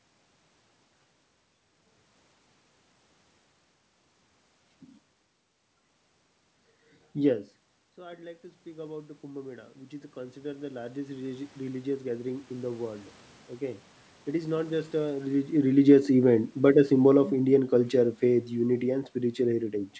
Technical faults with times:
7.18-8.07 automatic gain falling
8.02-11.96 automatic gain rising
14.46-19.77 automatic gain falling

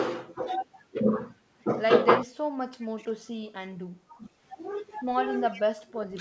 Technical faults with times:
2.24-2.31 speech suppressed in double talk
2.80-2.87 echo leak
2.98-3.09 speech suppressed in double talk
4.11-4.28 speech suppressed in double talk
5.49-5.62 echo leak
5.70-6.21 speech suppressed in double talk

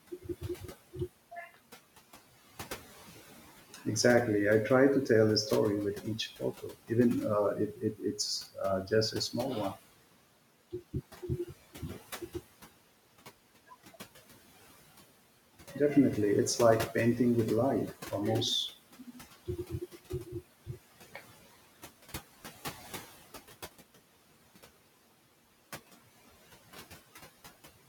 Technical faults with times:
0.00-27.89 noise suppressor artifacts
0.11-0.96 speech cut by the noise suppressor
3.74-3.86 speech cut by the noise suppressor
6.39-6.91 speech cut by the noise suppressor
7.55-9.77 speech cut by the noise suppressor
10.72-12.35 speech cut by the noise suppressor
18.92-20.35 speech cut by the noise suppressor

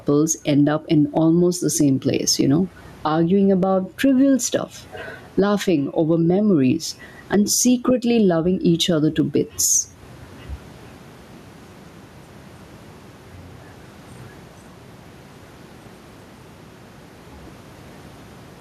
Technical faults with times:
0.00-18.61 gain pumping

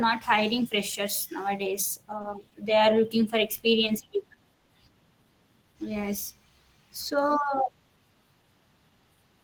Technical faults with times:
2.21-2.53 short stall from a late packet
4.54-4.72 call audio freeze

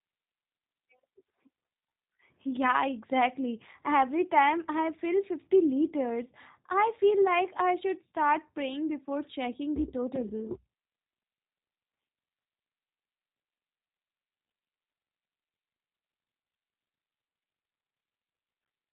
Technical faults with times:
0.00-18.93 G.729 codec

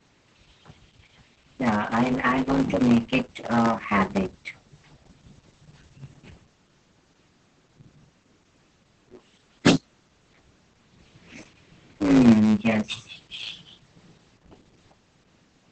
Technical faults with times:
0.00-15.71 block size mismatch (truncated)
0.00-15.71 Opus voice compression

